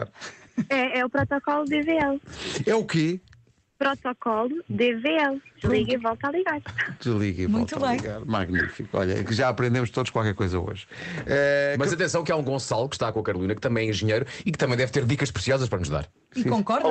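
From 3.69 to 3.79 s, a 100 ms stretch of the quiet background, which sits about 49 dB below the loudest parts, gives way to comfort noise, likely from Opus DTX pausing transmission and the receiver synthesizing filler. The real background's texture vanishes into a flat, featureless hiss about 4 dB quieter. On a spectrogram the band, already capped near 8 kHz by the call path, turns into a smooth, uniform wash; the waveform shows a brief, even dip in level.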